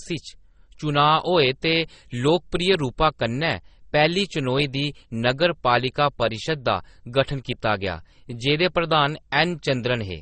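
Transcoding between lossy codecs runs through the whole clip. Nothing survives above 9.6 kHz, and two layers of coding damage are heard together: one set of artefacts under a second, which fits a low-bitrate MP3 likely re-encoded to Opus.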